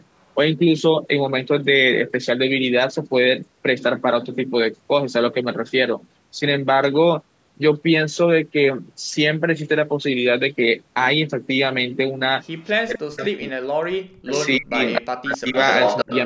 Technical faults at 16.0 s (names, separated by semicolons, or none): echo leak; speech suppressed in double talk